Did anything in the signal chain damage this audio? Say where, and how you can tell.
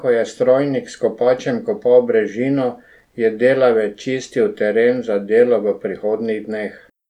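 No, nothing in the signal chain audibly damaged this speech.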